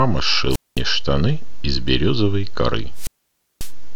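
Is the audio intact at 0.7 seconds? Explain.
No. A wireless microphone squelch dropout spans 0.50 to 0.81 s: the radio link fades, hiss rises, then the receiver squelch mutes the output for about 214 ms.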